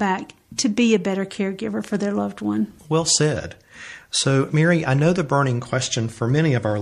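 The codec never switched to short blocks, so a sharp speech onset near 0.58 s was coded inside a long transform window of about 36 ms. Quantisation noise sized for the loud attack was spread across the whole block, filling the quiet gap before it. This is pre-echo. From 0.56 to 0.58 s a short hiss, about 11 dB above the surrounding floor, runs for roughly 20 ms ahead of the onset, leaving the attack softened and smeared rather than crisp.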